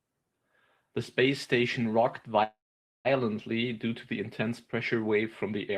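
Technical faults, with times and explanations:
2.43–3.07 s, call audio freeze: right after "space station rocked" the last sound is drawn out into a brief fading buzz, then drops to about 490 ms of silence before the speech resumes exactly where it stopped. The fill lasts 615 ms, nothing is lost, and everything afterwards arrives 615 ms later. This likely comes from packets held up in transit, so the jitter buffer ran dry and the receiver padded the gap.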